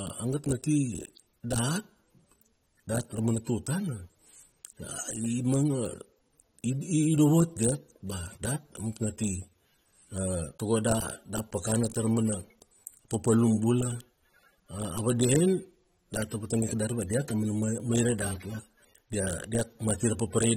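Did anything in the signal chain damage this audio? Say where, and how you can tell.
Yes. The speech sounds dull and smeared throughout, with a warbling, fizzy texture on sibilants and nothing above about 16.6 kHz. This is codec damage, likely from AAC compression at a low bitrate, which fits roughly 32 kbps: sparse quantisation leaves spectral holes and smears the detail.

Faint, regular ticks recur about once a second from 0.53 s to 19.85 s, some twenty in all. These are clock slip clicks at the converter or buffer stage. Two unsynchronised clocks, likely drifting roughly 30 ppm apart, cause a single-sample drop or repeat each time the error builds to a full sample.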